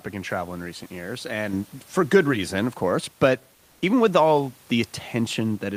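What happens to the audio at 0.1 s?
At 0.1 s the audio is intact, with only the room's own background noise sitting about 34 dB below the speech.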